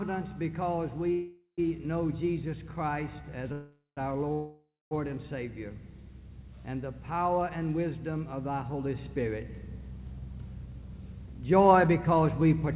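Three call audio freezes break the sound at 1.12 to 1.61 s, 3.53 to 4.00 s and 4.33 to 4.94 s. In each, the final sound before the break is stretched into a fading buzz that drops to silence for the last 0.12, 0.17 and 0.25 s respectively. The sound then resumes where it left off, with nothing skipped. This is most likely packets held up in transit, draining the jitter buffer until they arrive, which adds roughly half a second of delay each time.

From 10.66 to 12.68 s a jitter buffer speed-up plays the sound about 11 % fast at unchanged pitch, giving it a hurried feel. The receiver is cutting many short pitch-period slices to shed around a fifth of a second of built-up delay. Throughout, the band stops at 4 kHz, which fits G.711 A-law at 64 kbps.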